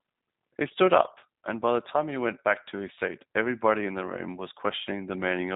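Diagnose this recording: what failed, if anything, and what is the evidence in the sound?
The speech sounds slightly rough and synthetic throughout, with nothing above about 3.8 kHz. The codec stage is at fault: G.729 codec damage, consistent with an 8 kbit/s voice codec rebuilding each 10 ms frame from a vocal tract filter, pitch predictor and sparse pulses.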